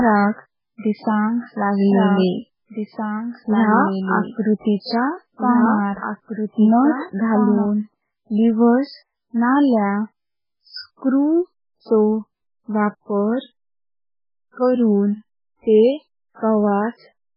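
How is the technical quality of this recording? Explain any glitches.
The quality is poor, with two faults.

Heavy MP3 compression runs throughout, which fits a very low bitrate near 8 kbps. Nothing sounds above 5.2 kHz. Weak detail flickers, giving a watery, smeared sound.

From 1.92 to 7.66 s, a doubled audio track is heard. A second full-band copy trails by roughly two seconds, about 5 dB quieter, likely from two out-of-step copies. It starts and stops abruptly.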